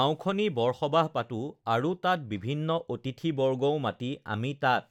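Nothing in this speech recording stands out as a technical fault, so there's no problem to point to anywhere along the way.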